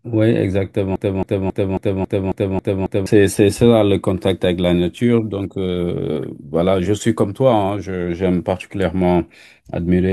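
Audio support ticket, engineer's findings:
Player, encoder or stream likely stalled and kept resending its last held fragment. Broken-record loop from 0.96 to 3.06 s: a 272 ms speech piece repeats 8 times back to back, and the underlying audio is lost.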